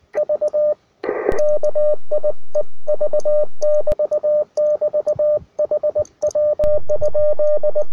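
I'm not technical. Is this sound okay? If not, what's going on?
No. There is a dull low thump at 1.32 seconds and another as it releases at 3.92 seconds, then a third thump at 6.64 seconds that holds until the end. This is a DC step: the waveform's resting centre line suddenly jumps away from zero and stays shifted. The speakers react to that sudden push with a thump, even though the sound itself carries on unchanged.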